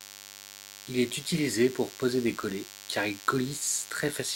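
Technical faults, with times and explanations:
Throughout, DECT cordless phone buzz: a thin, steady buzz with many harmonics sits under the speech at 100 Hz, roughly 15 dB below it. A nearby DECT handset or base sends a radio burst every 10 ms, and the audio circuitry rectifies those bursts into sound.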